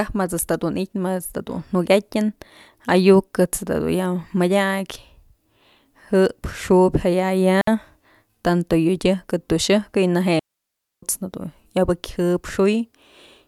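At 7.61 s the speech cuts to near silence for about 62 ms, then returns at 7.67 s; a longer gap follows from 10.39 s to 11.03 s, lasting about 0.63 s. Both are digital wireless dropouts: the radio link lost too much data, so the receiver muted the output with a very fast fade rather than pass corrupted audio. Each sounds like a clean hole, with no crackle or noise burst on either edge.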